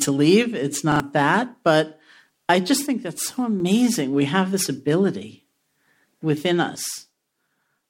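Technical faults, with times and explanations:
0.92–1.0 s, repeated buffer: a 40 ms piece of speech plays two extra times back to back, with a hard join at each repeat, producing a brief stutter. New audio arrived late, so the device replayed its last buffer, and roughly 70 ms of the original speech is missing.
2.87–3.60 s (just after "I just") and 6.76 s to the end, one channel drops out: the level falls abruptly by about 6 dB and recovers at 3.60 s. This is likely the loss of one stereo channel before the mono sum, which halves the shared content.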